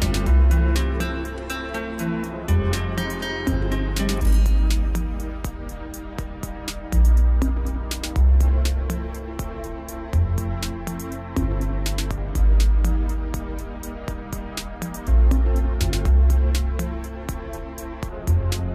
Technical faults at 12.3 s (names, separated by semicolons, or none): none